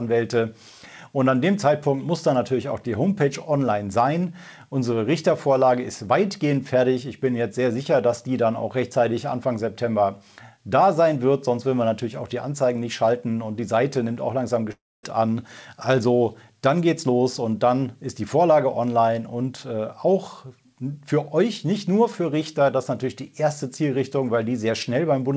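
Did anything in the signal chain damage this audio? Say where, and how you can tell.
Yes. The likely cause is a long network dropout, from 14.72 to 15.05 s. For about a third of a second no packets reached the receiver. Its concealment stretched the last sound into a fading buzz, which gave way to roughly 250 ms of silence. The audio then resumes with 320 ms of material gone rather than delayed. Throughout, nothing sits above 8 kHz, consistent with the G.722 call path the audio passes through.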